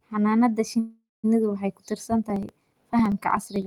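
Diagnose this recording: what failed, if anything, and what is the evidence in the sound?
At 0.79 s the speech stops moving forward and the last sound hangs on as a fading buzz that sinks into about 210 ms of silence before the talker resumes at 1.26 s. Nothing seems cut out: the speech picks up where it stopped, just later. That points to a call audio freeze at the network stage. Packets were most likely held up in transit and the jitter buffer ran dry, so the receiver stretched the final sound to cover a delay of about 440 ms.

From 2.24 s to 3.62 s there is a steady train of small ticks, roughly twenty of them, spaced evenly every 63 ms and heard only while speech is present. Each marks a skipped sliver of audio, around a millisecond long, with no silence inserted. These are periodic USB or driver dropouts at the driver or buffer stage: some background task is blocking the bus or audio driver on a fixed schedule, and each stall discards a short piece of the stream.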